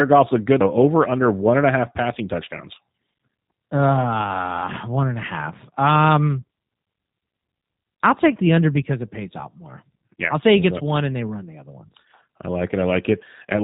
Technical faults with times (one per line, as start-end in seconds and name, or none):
0.00-13.63 G.729 codec